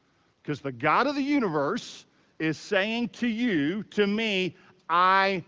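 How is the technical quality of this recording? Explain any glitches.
No glitches can be heard in this speech recording. It carries the sound of call microphone processing, with nothing above 8 kHz, and the speech stays clear through the AMR wideband (HD Voice) codec at a quality that points to one of its higher rates, around 18 kbit/s.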